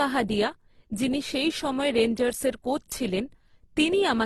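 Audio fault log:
throughout transcoding between lossy codecs: nothing above 13.5 kHz, and two kinds of codec smear heard at once, which fits a low-rate Opus encode likely re-encoded as HE-AAC.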